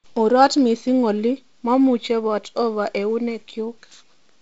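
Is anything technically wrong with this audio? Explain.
No, nothing here is faulty: it is speech carried over G.722 wideband telephone coding at 48 kbit/s, so it has no content above about 7.7 kHz and light coding hiss, as that path normally does.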